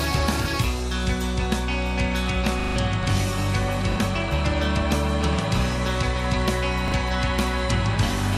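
A short stretch of audio with a repeated buffer problem in three places. At 2.6 to 2.76 s the same tiny slice plays over and over with hard joins, a stutter that swallows around 150 ms. Single quick repeats follow at 3.92 and 6.88 s, each just a brief hiccup. The repeating slice fits a 40 ms buffer, so the device kept replaying its last chunk when fresh audio arrived late.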